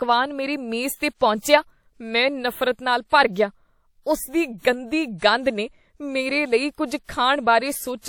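At 7.04 to 7.09 s, just before a sharp onset in the speech, a pre-echo appears: a short hiss of about 47 ms that arrives ahead of the attack itself. The codec spread its quantisation noise across the whole transform block, so noise sized for the loud onset also fills the quiet gap before it, and the attack sounds softened. Unlike room echo or reverb, which trail after a sound, this smear comes before it.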